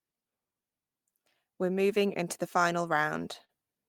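Right after "moving into the final", from 3.09 to 3.51 s, the speech hits repeated stalls (stutter). Packets arrived late or slower than playback, so the jitter buffer ran dry four times. Each time the receiver stretched the last sound to bridge the gap, about 74 ms in total, with the longest hold at 44 ms. Nothing is lost, but roughly a fifth of that stretch is concealment, so the phrase drags and judders.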